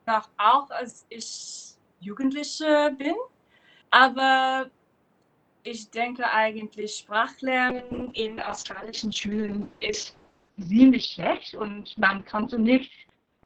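At about 7.7 s there's a call bitrate drop that never recovers before the end. The bandwidth estimate collapsed, so the encoder had to squeeze everything into a tiny bit budget, which sounds like a fall from around 128 kbps to something near 6 kbps. The top end gets chopped from 20 kHz down to about 4 kHz, so it goes muffled, and the coarse coding adds a rough, watery texture that stays at its worst for roughly the last 4.7 s.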